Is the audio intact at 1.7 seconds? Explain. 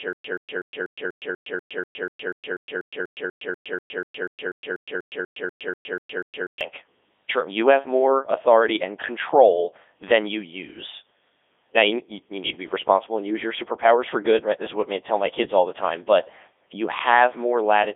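No. At 1.7 seconds the stream is likely stalled and retrying, producing a stutter with silent gaps that is already under way when the clip starts and runs to 6.61 s. The same 0.13 s fragment replays 26 times, once every 0.24 s, with about 113 ms of digital silence between repeats. The audio meant for that span is lost.

Throughout the clip, the speech has also passed through the Codec 2 vocoder at 3.2 kbit/s. It sends only pitch, voicing, energy and a spectral envelope, so the decoder rebuilds the voice from sine waves. The result is heavily robotic and buzzy, with nothing above 3.8 kHz.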